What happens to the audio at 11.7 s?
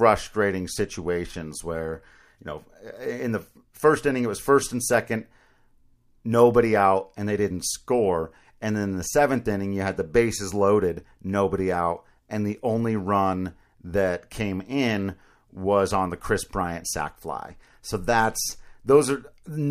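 Nothing goes wrong at 11.7 s; the speech there plays through cleanly with no dropout, click, distortion or other fault.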